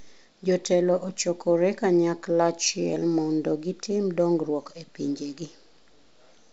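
Nothing goes wrong anywhere in this speech clip; it's simply carried over G.722 wideband telephone coding at 64 kbit/s, which is working as it should.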